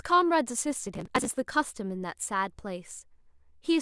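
A burst of gritty crackle tears through the speech from 0.87 s to 1.30 s, a rough, broken texture made of many tiny dropouts packed close together, which stops abruptly once that stretch ends. This is processor overload crackle: the processor fell behind and missed deadline after deadline for its small audio buffers, each apparently around 10 ms long, and because every missed buffer was simply skipped, about forty short, hard-edged gaps landed in that span.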